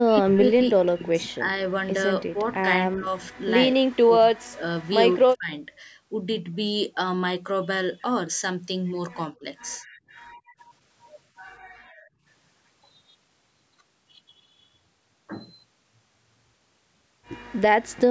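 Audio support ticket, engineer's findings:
Speech suppressed in double talk, 0.05–1.48 s: talker ducks in patches, about 30 dB deep, roughly a second in total. Likely the echo canceller mistaking near-end speech for loudspeaker echo while both sides talk. 2.25–5.52 s: same again but harder, drops near 40 dB, about a second and a half chopped. Likely the canceller clamping down through double talk. 9.4–9.86 s: quick shallow dip, around 10 dB, very brief. Likely the same suppressor briefly engaging.

Background gated by the echo canceller, 10.37–10.58 s: room tone falls out about 25 dB for a fifth of a second, then comes straight back. Canceller pulling the mic down while far-end audio plays out the speaker, then releasing. 11.63–12.25 s: longer and deeper gate, about 38 dB, most of a second. Same mechanism, the canceller holding the mic down. Top end stops at 8 kHz throughout, consistent with the call mic chain.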